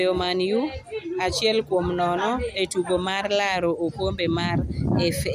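A short speech recording with no technical faults. Nothing in the audio calls for a time, a value or a cause.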